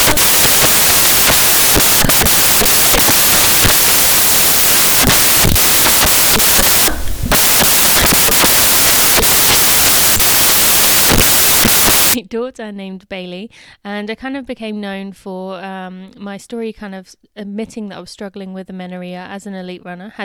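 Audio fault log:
0.00–12.14 s, samples built from the wrong bytes: each sample's bytes are misassembled, so rapidly changing low bits dominate and the speech becomes loud, harsh broadband noise until just before "daughter named". A spectrogram shows flat broadband energy; the waveform looks like dense fuzz.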